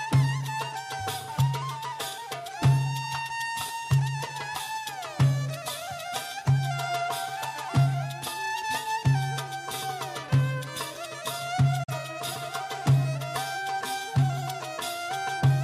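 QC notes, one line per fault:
11.83 to 11.93 s, digital broadcast dropout: the audio fades out over about 8 ms, drops to silence, then picks up again a moment later. The receiver got a frame it couldn't decode, either a corrupt frame or a brief loss of signal, and muted rather than play out garbage. About 43 ms of programme is gone, which fits a single lost frame. The quick fade makes it sound like a short hole rather than a click.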